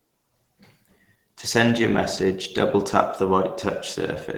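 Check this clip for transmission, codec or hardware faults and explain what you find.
One fault runs through the whole clip. Opus compression, throughout: the low band sounds coded by a speech-style model and the upper band by coarse band-energy coding, likely Opus in hybrid mode at about 16 kbps. The full bandwidth survives, but the speech sounds plainly muffled, hoarse and grainy.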